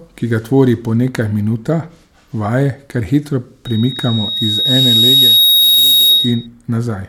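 From 3.65 to 6.47 s, a loudspeaker feedback squeal: the microphone re-amplifies its own loudspeaker, so a 3.8 kHz tone swells over about two seconds, ending above the speech.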